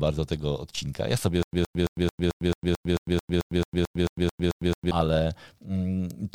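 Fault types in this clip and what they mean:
Stutter with silent gaps: from 1.43 to 4.91 s a 118 ms burst repeats 16 times with 102 ms silence between, likely a stalled stream replaying its last fragment.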